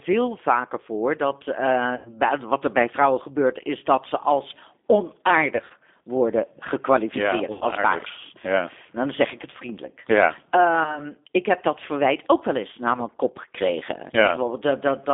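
The whole clip is speech carried over the G.729 codec at 8 kbit/s. It rebuilds the signal from a vocal tract filter, a pitch predictor and a few pulses per frame. The line band runs from 250 Hz to 3.6 kHz, so the sound is thin and boxy. The coding damage is plainly audible: a rough, slightly synthetic grain on every syllable.

Five dropouts are covered by VoIP packet loss concealment from the speech codec. The decoder repeats its last pitch and filter and lets the level sink, which smears the sound into a fading buzz or coloured noise. The first is at 1.96 to 2.12 s, after "vaker voor dat eh" and before "wat er bij vrouwen". It fits about 90 ms of missing audio. A brief one follows at 3.97 to 4.00 s, between "bij vrouwen gebeurt is" and "ze als". The next, at 5.56 to 5.73 s, is scattered gaps over 140 ms, the longest about 50 ms. Another is at 7.53 to 7.64 s. The last is at 10.84 to 11.01 s, just before "ik heb dat verwijt". 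Each leaves the sound weak for a moment after it.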